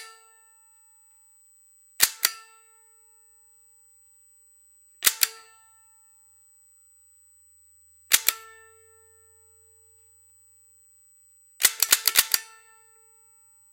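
A thin, steady high-pitched whine at 8 kHz sits under these everyday sounds for the whole clip, around 35 dB below them. This is USB whine: the bus's 125-microsecond microframe current pulses leak through shared power or ground into the audio path.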